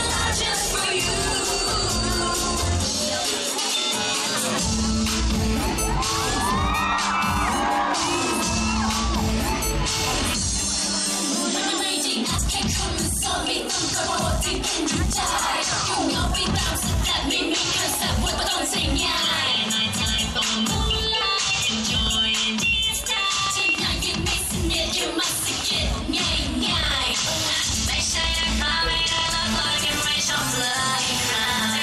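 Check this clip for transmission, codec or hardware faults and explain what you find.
One fault is present. From 14.55 s to 31.59 s, a train of clicks, likely electrical interference or a faltering interface, injects irregular pulses: around seventy ticks, about 3.7 per second, peaking roughly 10 dB above the sound.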